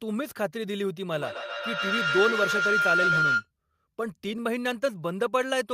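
A feedback howl runs from 1.11 to 3.50 s: two devices in the same room are on the call, so a microphone picks up the other device's loudspeaker and each pass round the loop gains level. The sound narrows to a ringing tone near 1.5 kHz, pulsing about every 150 ms, peaking about 3 dB above the speech.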